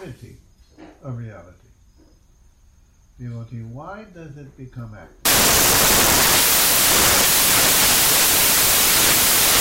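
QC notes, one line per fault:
5.25–9.60 s, samples built from the wrong bytes: from here to the end the reader is stitching each sample's bytes together misaligned or in swapped order, so the jittery low bits land in the loud part of the value, giving a blast of harsh broadband noise.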